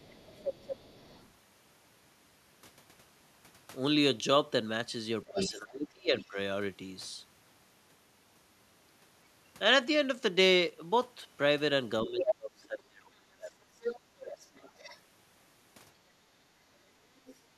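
From 0.0 to 1.28 s a second, fainter voice sits about 15 dB under the speech: the other side's voice leaking through, likely because a loudspeaker's output reached the microphone and the echo canceller left some of it in. It adds a voice rather than removing anything, which is what separates it from the suppression faults later on. From 5.27 to 6.25 s the leak returns much louder, only about 5 dB below the talker. Over almost the same span, 5.29 to 6.37 s, the talker's own speech is pulled down in pieces by as much as about 25 dB, for roughly 0.7 s in total. This is speech suppressed in double talk, likely the canceller failing to tell the two voices apart while both were active, so it ducked everything. From 12.05 to 14.09 s the same ducking lasts longer, cutting the talker by up to about 25 dB across roughly 2 s. In that stretch the leaked voice surfaces at 12.19 to 12.34 s at about the talker's level, then again from 13.81 to 14.99 s, about 15 dB down. 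A faint scrap, about 25 dB down, leaks at 17.26 to 17.35 s, and from 17.48 s to the end the talker drops by about 35 dB for roughly 0.1 s.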